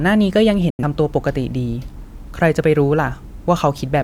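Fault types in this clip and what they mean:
Digital broadcast dropout: The receiver stopped getting valid frames and muted until good ones arrived. At 0.70 s the speech fades out in about 3 ms and stays silent until 0.84 s. The gap fits two lost frames. That stretch of audio is gone.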